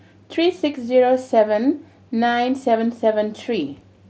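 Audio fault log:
Nothing stood out on listening to this speech clip.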